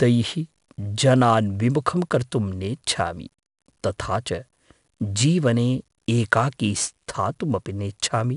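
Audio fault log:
throughout: 4-bit ADPCM compression. A gritty hiss rides on the speech and swells and fades with its level, and sharp onsets roughen because the coarse step size adapts too slowly. Unlike steady background hiss, it dies away in pauses. Nothing sounds above 10.6 kHz, which fits a rate near 88 kbps.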